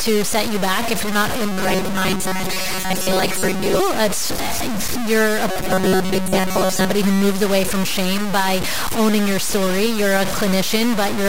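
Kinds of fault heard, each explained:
Low bit depth without dither: The whole clip carries a coarse, grainy distortion that shifts with the speech, and the quiet stretches crumble or sputter instead of fading smoothly. That points to samples that were likely cut down to very few bits, something like 3, and truncated with no dither. The error then follows the signal and sits only about 5 dB below it, so the grit never lets up.
Robotic sound from repeated short buffers: Twice the speech turns into a stiff metallic buzz, from 1.52 to 3.8 s right after "if you're not in", and from 5.51 to 6.91 s between "you're a" and "who moves away from". The buzz is fixed at 188 Hz, which fits playback likely looping a chunk of about 5.3 ms while most of the real audio is skipped, so the words only roughly come through.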